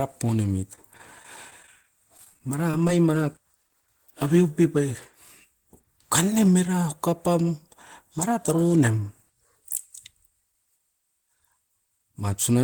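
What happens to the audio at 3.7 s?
A brief smear or wobble, from 3.68 to 3.70 s just before "aveu pep", is short concealed packet loss: about 10 ms never arrived, and the decoder extended the preceding sound to bridge it.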